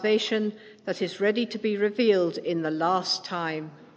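No technical faults can be heard anywhere in the clip.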